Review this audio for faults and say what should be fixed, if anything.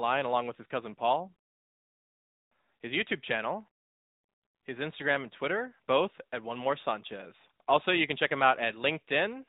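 The whole clip carries the sound of the AMR narrowband mobile codec: the speech has nothing above 4 kHz and a plainly synthetic, coded edge, which fits a mid-rate AMR-NB mode around 10.2 kbps. The codec rebuilds speech from a vocal-tract model driven by sparse pulses. To avoid this, capture or export the source directly rather than routing it through a mobile call path.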